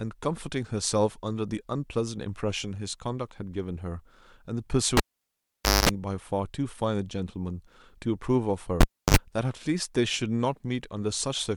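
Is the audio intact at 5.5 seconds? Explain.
No, the cable was pulled and plugged in from 4.97 to 5.89 s: a pop, about 0.87 s unplugged, including 0.22 s of 50 Hz buzz, and another pop, unlike a clean dropout.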